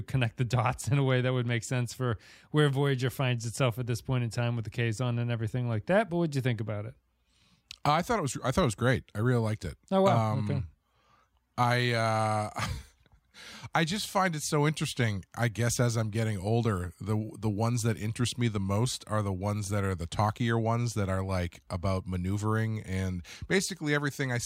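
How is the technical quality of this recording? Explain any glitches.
No glitches or technical faults are audible here.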